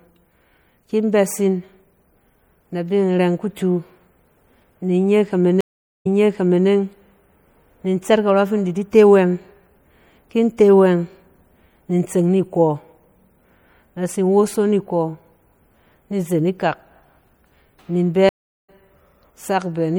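Speech clip with audible MP3 compression throughout: a watery, swirly texture fitting a likely 64 kbps encode, seen on a spectrogram as a hard treble ceiling and flickering holes. Two stream reconnects show as flat waveform gaps. At 5.61–6.68 s there is about 0.45 s of silence, and then audio resumes 0.62 s earlier, repeating material. At 18.29–18.70 s there is about 0.39 s of silence, and then audio resumes roughly 0.2 s later, skipping ahead.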